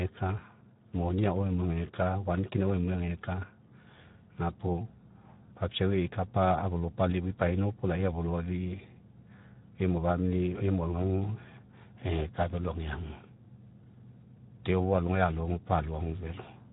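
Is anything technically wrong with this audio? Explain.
Yes. Speex codec damage runs through the whole speech clip. The encoder has too few bits to describe the excitation, so the voice sounds noisy and hoarse. That fits a rate near 11 kbps. Nothing remains above 3.8 kHz.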